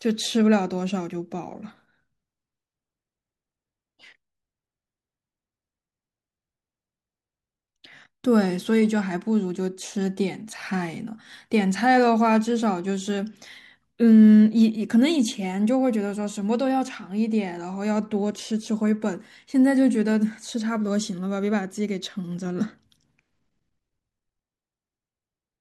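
No technical faults can be heard anywhere in this speech recording, and the signal stays steady and intact throughout.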